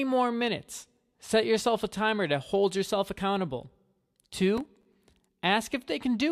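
From 4.57 to 4.95 s the speech is torn by processor overload crackle: the processor falls behind and misses a run of buffer deadlines, around fifteen of them, each leaving a brief hole of silence a few milliseconds long, which fits buffers of roughly 3 ms. The abrupt edges around each gap produce a gritty, clicking burst over the sound. On a waveform the signal shows scattered flat dropouts; a spectrogram shows a cluster of thin vertical broadband streaks across that span.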